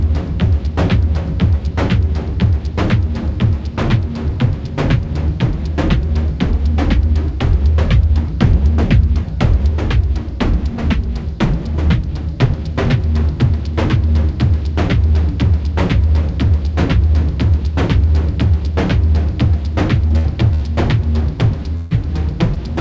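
Around 20.08 to 20.12 s and again at 22.54 to 22.58 s, short concealed packet loss drops about 20 ms of audio, which the receiver patches by extending the preceding sound, leaving a brief smear. At 20.18 to 20.26 s, 20.54 to 20.62 s and 21.76 to 21.92 s, a burst of packet loss removes about 60, 60 and 140 ms. The concealment stretches and fades the last sound into a held buzz or dying hiss before the audio resumes further along.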